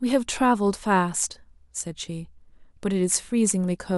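No technical faults can be heard in this recording.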